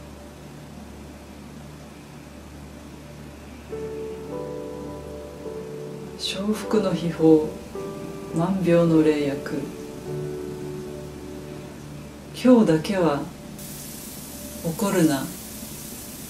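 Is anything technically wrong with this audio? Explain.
Yes. From 13.59 s to the end, pre-emphasis is left on. The treble lift applied for transmission, here following the FM 75 µs curve, was never undone by the matching de-emphasis, so the top end sits about 13 dB higher at 10 kHz than at 1 kHz. The sound turns thin, bright and hissy. Unlike a generic treble boost, the rise climbs steadily from roughly 2 kHz upward, which points to a standard broadcast curve rather than an EQ setting.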